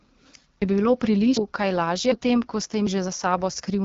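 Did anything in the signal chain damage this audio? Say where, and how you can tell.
Yes. The codec stage is the main culprit. The speech has passed through the AMR wideband (HD Voice) codec at 8.85 kbit/s, one of its two lowest rates, and the damage is plainly audible as a rough, raspy texture throughout. At this rate the pulse-excited vocal tract model can't track the voice finely. On a spectrogram, energy stops dead at about 7.5 kHz, and the top band shows as smeared noise rather than harmonic detail.

There are also abrupt skips at 0.62, 1.37, 2.12 and 2.87 s, repeating every 0.75 s. At each one, around a third of a second of sound vanishes and the two sides butt straight together with no silence. The likely cause is audio missing between chunks in the recording or processing buffer. Roughly 300 ms dropped per 1 s chunk would give roughly this spacing. In the waveform these show as hard discontinuities, with no gap, at those regular points.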